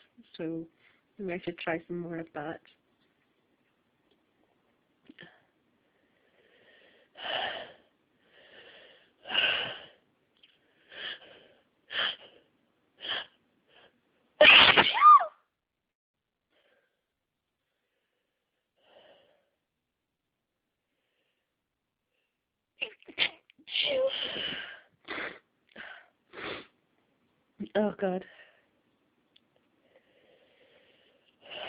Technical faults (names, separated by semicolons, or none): call bitrate drop; call audio freeze; skip ahead; jitter buffer slow-down